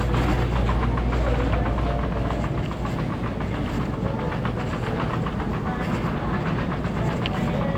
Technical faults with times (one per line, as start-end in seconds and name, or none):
none